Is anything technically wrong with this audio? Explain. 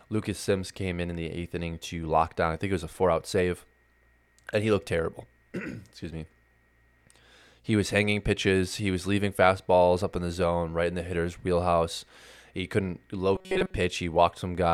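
Yes. Robotic sound from repeated short buffers appears from 13.36 to 13.75 s, near the end of the speech. The likely cause is fresh audio arriving too slowly, so playback keeps looping a tiny slice, about 5.3 ms long, in place of the missing material, with most of that stretch made of repeats. This imposes a fixed 188 Hz buzz, so the voice turns rigid and metallic while loosely tracking the words.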